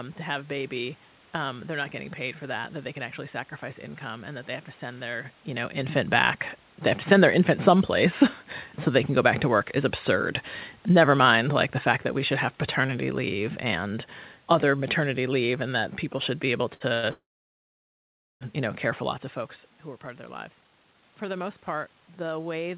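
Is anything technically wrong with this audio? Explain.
Yes. From 11.03 to 15.58 s, automatic gain falling: the gain control judged the input too loud or its background noise too strong and gradually lowered it by about 4 dB, so the speech and its background sink together.

At 16.74 to 16.82 s and 16.94 to 17.05 s there are two short stalls from late packets. The jitter buffer ran empty, and the receiver stretched the last sound for 63 ms and then 86 ms, holding it unnaturally long.

From 17.11 to 18.43 s, between "people should be able" and "you know care for", there is a call audio freeze. Packets were likely held up in transit. The receiver continued the last sound briefly, then about 1.2 s of silence follows before the speech resumes where it stopped.

From 19.18 s to 22.77 s, after "you know care for", a jitter buffer speed-up occurs. The receiver trimmed small pitch-period slices, roughly 0.7 s in total, to cut the built-up delay, so the speech runs about 18% fast at unchanged pitch and sounds hurried.

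Nothing is heard above 4 kHz, which fits a narrowband call codec such as G.711.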